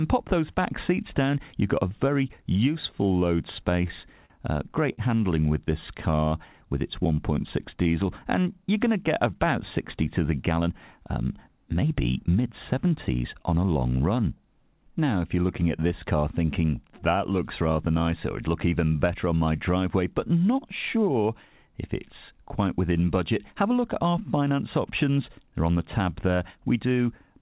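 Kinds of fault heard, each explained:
Scattered short gaps: between 3.9 and 5.9 s, about five tiny dropouts get papered over by stretching the previous sound, leaving brief ticks and smears.
Jitter buffer slow-down: from 4.8 to 8.4 s, repeated pitch periods pad in 184 ms, so the sound drags at 95% speed without dropping pitch.
Jitter buffer speed-up: from 10.5 to 13.4 s, trimmed pitch periods shave off roughly 150 ms, pushing the sound to 106% speed so it feels rushed.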